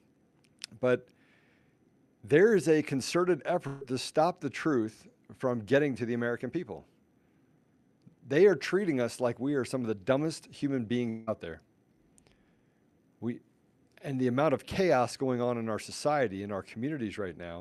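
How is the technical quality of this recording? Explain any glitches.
The recording has two glitches, both from the network side of a call. The top end stops at about 12 kHz, which fits Opus at around 64 kbps.

Burst of packet loss, 3.67 to 3.83 s: A short run of packets never arrived in time, so the receiver stretched the last bit of sound it had and faded it down across the gap. You hear about 140 ms of held, dimming sound, with no true silence. Then the speech picks up further along, with that slice of it gone.

Long network dropout, 11.09 to 11.29 s: This sounds much like the first one, only longer. The sound smears into a fading tail for roughly 180 ms, never quite hitting silence, and then the speech resumes with that stretch missing. The likely cause is the incoming audio stopping entirely for a moment, with the receiver's concealment filling the hole from the last sound it had.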